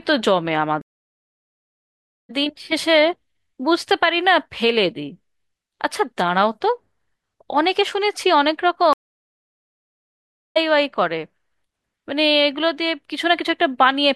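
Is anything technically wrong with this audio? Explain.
Yes, there are two stream reconnects. At 0.82 s and again at 8.93 s the connection dropped, and the player restarted its decoder mid-stream. The speech goes silent for 1.48 s and 1.63 s, then resumes with a soft fade-in. About a second and a half of speech is skipped at the first break and about a second at the second.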